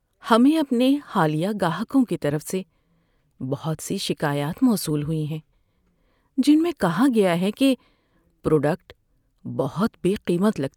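No technical faults are audible.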